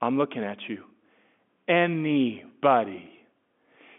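No technical faults can be heard anywhere in this speech recording. It carries the narrow sound of G.711 telephone coding, with the audible band running from about 200 Hz to 3.5 kHz and nothing present above about 3.8 kHz.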